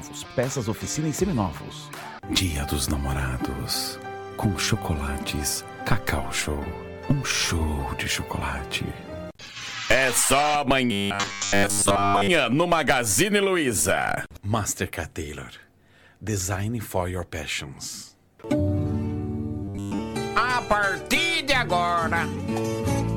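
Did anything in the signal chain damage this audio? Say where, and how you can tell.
Yes. Robotic sound from repeated short buffers appears from 10.92 to 12.29 s and again from 19.64 to 20.00 s, most likely at the driver or buffer stage. Both stretches carry a rigid, metallic buzz fixed at 100 Hz, which fits a 10 ms chunk being replayed over and over while fresh audio fails to arrive in time. Roughly 70% of the sound in those spans is repetition, so the real material is largely skipped.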